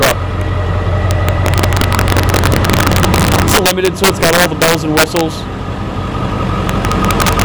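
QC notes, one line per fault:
throughout, integer overflow: peaks driven about 7 dB past the limit wrap to the opposite sign, giving sharp cracks; waveform shows flipped peaks, spectrogram shows vertical broadband streaks.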